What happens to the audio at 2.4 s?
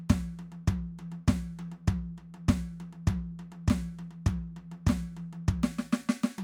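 At 2.4 s the music plays through cleanly, with no dropout, click, distortion or other fault to be heard.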